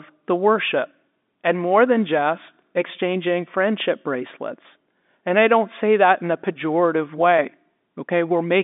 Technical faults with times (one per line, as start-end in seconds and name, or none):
none